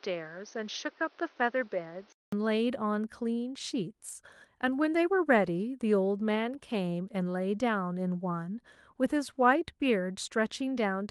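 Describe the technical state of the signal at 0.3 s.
At 0.3 s the signal sits inside a band-limited stretch running from 0.0 to 2.32 s, most likely an input switched to a poorer device. Nothing reaches above 6.4 kHz, so the speech sounds dull and boxy. The level is a few dB lower, and a new noise floor sits roughly 30 dB under the signal. There is a short gap of 200 ms at the switch.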